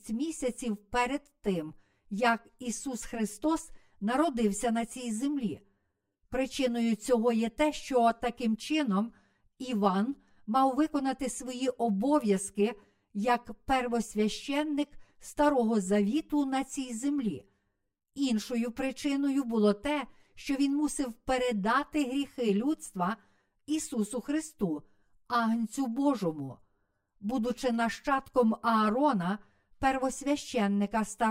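From the first second to the end, the speech sounds hollow and a bit phasey, a clear case of channel delay (comb filtering). One channel is running late by around 10 ms, and when the two are folded to mono, whatever they share cancels at evenly spaced frequencies. The first notch sits somewhere near 50 Hz, with more following every 100 Hz or so up the spectrum. That fixed pattern of dips gives the whole clip its thin, boxy colour.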